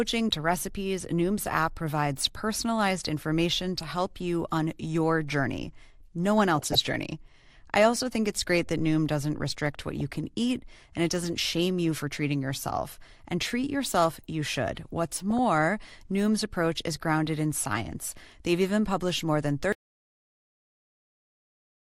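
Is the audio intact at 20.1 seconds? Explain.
No. At 20.1 seconds the clip is inside an audio dropout to silence that begins at 19.73 s, right after "even published more than", and runs to the end. The signal stops mid-phrase into silence, likely from a lost input while recording continued. Unlike a fade or a noise gate, nothing decays and no room tone remains; the gap is silent.

The MP2 compression heard up to that point leaves the sound dull and gurglingly granular, which fits roughly 80 kbps. The likely cause is a starved Layer II encoder dropping upper sub-bands and coarsely quantising the rest. Unlike a simple low-pass filter, the missing highs flicker in and out.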